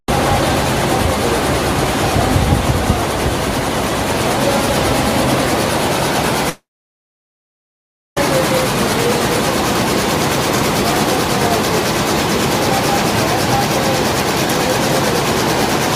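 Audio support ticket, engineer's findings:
Audio gap 6.49 to 8.17 s, about 1.7 s. Brief fading buzz or hiss after last sound, then near-silence for roughly 1.5 s; resumes with content missing. Likely long network dropout: packets stopped arriving, receiver concealment decayed to silence, lost audio never recovered.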